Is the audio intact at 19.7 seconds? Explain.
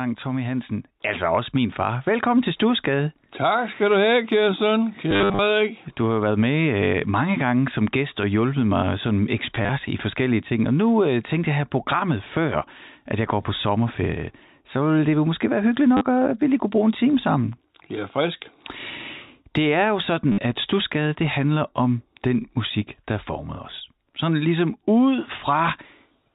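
Yes, the speech at 19.7 seconds is intact, with no dropout, click or other fault at that moment beyond the narrow telephone-band sound of its G.711 coding.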